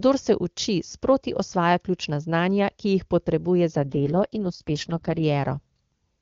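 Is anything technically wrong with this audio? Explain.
Yes. From 3.80 to 5.23 s, right after "ki jih potrebuje za", there is an AMR rate drop. The speech turns rough, raspy and synthetic, which fits the wideband codec falling from about 23.85 kbit/s to its lowest 6.6 kbit/s mode to protect a weak link. There is no gap and no band narrowing, which is what sets it apart from packet loss or a switch to narrowband.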